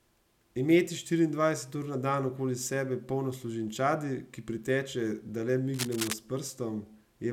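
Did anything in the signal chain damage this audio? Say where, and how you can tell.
Yes, in the analogue wiring. Just after "ki priteče da le", from 5.74 to 6.14 s, a dense, uneven scratching rides over the speech, only a few dB under it. That's cable scratch noise, likely a worn cable or connector shifting and its contact resistance jittering.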